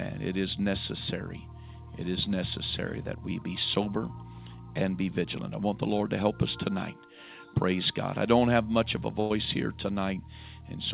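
At 9.2–9.32 s, a burst of packet loss drops 100 ms, filled with the last sound fading as a decaying smear before the waveform jumps.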